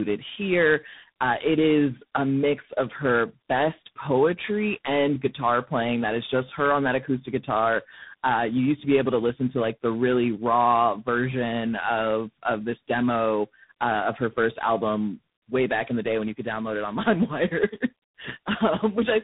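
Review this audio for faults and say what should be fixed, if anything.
Tandem speech coding is present throughout: the speech is rough, muffled and warbly, with nothing above 3.8 kHz. Each coder re-encodes the previous one's artefacts. The sound points to three speech codecs in series, likely a low-rate mobile codec, CVSD and 24 kbit/s G.726. To prevent it, negotiate a common codec or use transcoder-free operation so the speech is encoded only once end to end.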